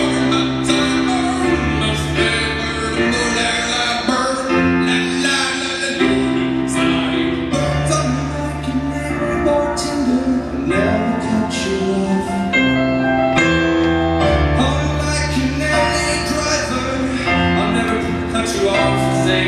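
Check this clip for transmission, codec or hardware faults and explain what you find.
Checking this clip turns up nothing to explain, as no fault can be heard anywhere in it.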